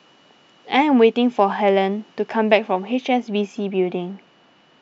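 Speech that turns dull and muffled from 2.94 s to the end, its treble rolling off smoothly to about 8 dB down at 10 kHz relative to 1 kHz. This is de-emphasis applied wrongly: a treble cut meant to undo pre-emphasis was applied to audio that had none, or applied a second time.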